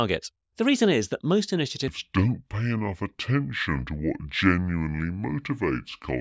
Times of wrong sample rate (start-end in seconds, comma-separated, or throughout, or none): 1.88-6.21